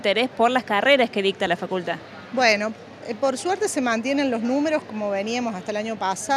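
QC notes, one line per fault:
No faults found. Nothing in this audio calls for a QC entry.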